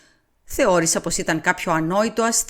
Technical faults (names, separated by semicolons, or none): none